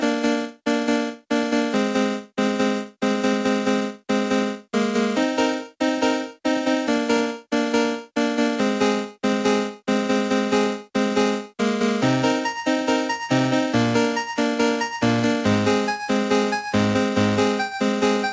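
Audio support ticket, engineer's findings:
No faults found in clip.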